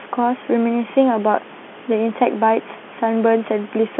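Nothing here goes wrong technically: the speech comes over an ordinary telephone line with its usual 200 Hz to 3.4 kHz band and nothing above 3.8 kHz, and the room's own background noise stays about 20 dB beneath it.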